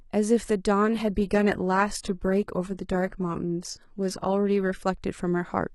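A speech clip in which an adaptive stream drops to a lower bitrate from 0.82 to 4.82 s. Quality changes abruptly, with codec artefacts rising, then snaps back, which fits a switch to a low-rate HE-AAC rendition. Unlike a dropout or packet loss, the audio never goes silent.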